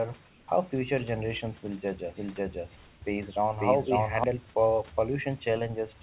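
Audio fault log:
0.28–0.48 s and 2.76–3.02 s, comfort noise in place of the background: the room hiss turns flat and featureless, about 2 dB then about 1 dB quieter, likely discontinuous transmission filling pauses. The first gap sits just before "how future generations will".
2.08–4.24 s, doubled audio track: right after "future generations will judge", a second dry copy at about equal level trails by roughly half a second and starts and stops abruptly, likely from a slower second capture path.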